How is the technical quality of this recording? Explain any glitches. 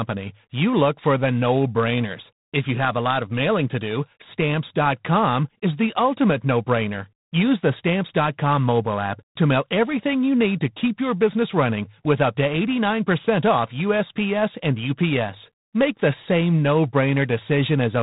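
Technical quality is poor: throughout, the speech has G.726 ADPCM coding damage. Each sample codes only a few bits of prediction error, so a harsh, rasping hiss rises and falls with the speech level, unlike steady background noise, which fits 24 kbit/s. Nothing passes above 3.9 kHz.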